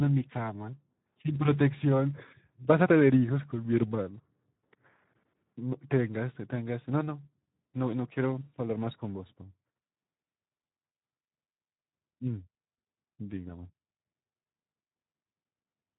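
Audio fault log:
throughout Speex codec: the speech has been squeezed through the Speex CELP coder at a setting with few bits to describe the excitation, which fits a bitrate of about 11 kbps. The codec damage is plainly audible. The harmonic structure of the voice is roughly modelled rather than carried through, so it sounds hoarse and grainy. Nothing remains above 3.8 kHz, which leaves the speech dull and telephone-narrow, with a muffled top end.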